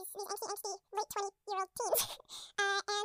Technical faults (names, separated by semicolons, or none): audio read two samples at a time (double speed)